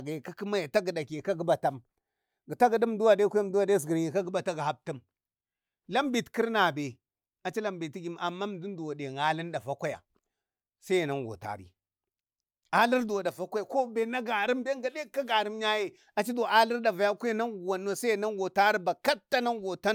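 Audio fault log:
No audible faults detected.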